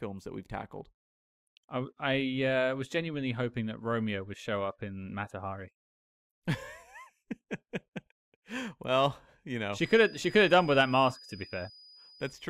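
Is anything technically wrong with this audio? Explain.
Yes. From 9.75 s, just after "well you know", a feedback whistle sits at about 4.9 kHz until the end at 12.50 s. It is thin and steady in pitch, well below the speech, swelling and fading slowly in level. The likely cause is a loudspeaker-to-microphone loop held at the edge of feedback.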